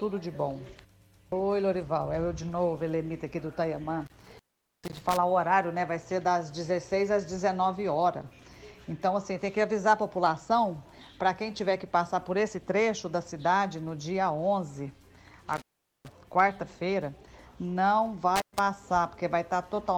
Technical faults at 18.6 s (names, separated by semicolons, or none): intermittent contact